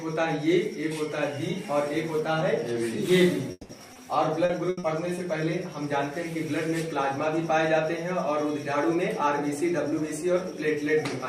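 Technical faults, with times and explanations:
3.51–3.71 s, long network dropout: a fading buzzy continuation of the preceding sound collapses into a brief silence, likely because about 180 ms of audio never arrived and was replaced.
3.93–3.97 s, short concealed packet loss: a quick smear where roughly 20 ms went missing and the receiver extended the last sound before blending back in.
4.45–5.19 s, repeated packet loss (robotic sound): choppy stretch from four separate gaps, the longest 80 ms, each patched by continuing prior sound, concealing about a quarter of the span.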